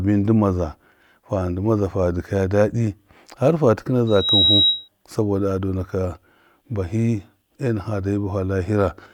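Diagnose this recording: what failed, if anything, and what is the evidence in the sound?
Loudspeaker feedback squeal in the analogue stage, where the acoustic loop from loudspeaker back into the microphone closes. Just after "fa dɨkaya dadi harfa", a single tone at 3.8 kHz appears at 4.07 s. It swells over roughly a third of a second to about 5 dB above the speech and stops at 4.88 s. At that frequency the loop gain exceeded unity, so the tone fed on itself until it stopped.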